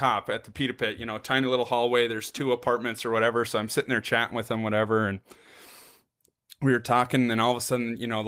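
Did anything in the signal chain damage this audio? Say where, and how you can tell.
No, nothing in the signal chain damaged this speech.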